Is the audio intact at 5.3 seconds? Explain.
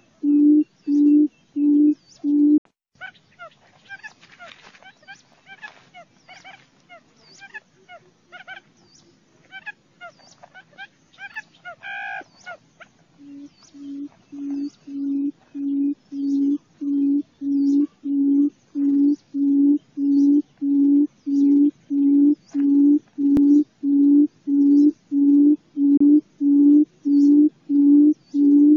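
No. At 5.33 s there is an overlapping-chunks fault: the next 6-second chunk begins early, replaying about 13 ms of audio and producing a brief click.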